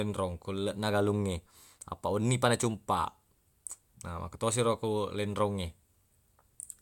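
No technical faults can be heard anywhere in the speech. The audio runs without any break or disturbance from beginning to end.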